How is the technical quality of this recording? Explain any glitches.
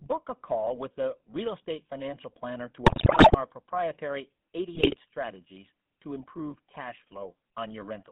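The quality is rough: it's a phone-grade recording with two bursts of corruption.

Throughout there's GSM full-rate codec coloring. The band runs from about 150 Hz to 3.5 kHz, and the pulse-driven excitation gives the speech that buzzy, gravelly edge, which fits 13 kbps GSM.

GSM bit errors hit from 2.86 to 3.37 s and again from 4.75 to 4.96 s. Corrupted filter, pitch and gain values garble frames into squawks, pops and gargling, and the first burst is the heavier one.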